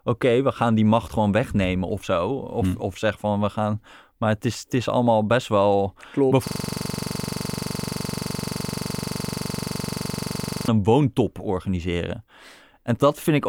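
After "is allemaal best wel", from 6.47 to 10.68 s the speech becomes a rapid, rattling 23.4 Hz buzz. This is a system hang loop: a frozen computer or driver left the hardware replaying one 42.67 ms piece, fitting a 2048-sample buffer, until "een woontop organiseren".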